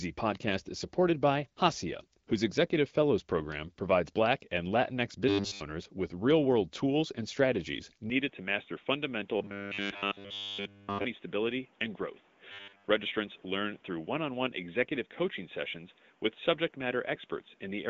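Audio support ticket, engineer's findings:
Robotic sound from repeated short buffers at 5.29–5.61 s, ending just before "with real world tools". Rigid, metallic 100 Hz buzz replaces the sound, with virtually nothing new coming through.

Same fault at 9.37–11.06 s and 12.52–12.84 s, identical 100 Hz buzz. Likely cause: playout starved, last chunk looped; 100 Hz fits a 10 ms buffer. Differs from codec rasp: pitch stays locked regardless of intonation.

Input switched to a poorer device at 8.1 s, right after "world tools and strategies", through the end. Band abruptly narrower (previously wider, consistent with the AMR-WB path). New noise floor about 35 dB below signal. No gap and no level jump at the switch.

Likely cause: capture moved to a headset call profile or lesser mic. Unlike codec rate drop: instant, brings its own noise, never recovers.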